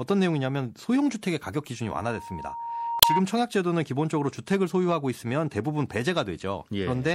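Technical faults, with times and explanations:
Throughout: MP3 compression, plainly audible. The treble is cut off and weak detail flickers in and out between frames, giving the speech a watery, swirly edge. Sibilants turn metallic and attacks smear. A low bitrate, around 64 kbps, is the likely cause.
1.85 to 3.23 s: loudspeaker feedback squeal. A single tone near 934 Hz swells over about a second and a half. The microphone is picking up its own loudspeaker, and at this frequency the loop gain passes one. It ends up roughly 5 dB above the speech.
2.99 to 3.05 s: damaged data in a compressed stream. A brief glitch cuts through the squeal. Corrupted bytes make the decoder misread frames and lose sync. It then hunts for the next valid frame header.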